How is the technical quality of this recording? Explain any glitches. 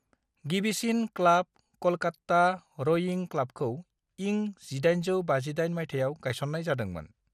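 The technical quality is compromised by audible lossy coding damage running through the whole speech recording.

Throughout, the sound is dulled and carries a gurgling, grainy distortion, most likely from MP2 compression at a low bitrate, which fits roughly 80 kbps. Layer II divides the spectrum into 32 sub-bands and, when bits run short, drops the upper ones entirely and quantises the survivors coarsely. On a spectrogram, energy stops sharply at 14.4 kHz, with patchy blocks flickering in and out below that ceiling.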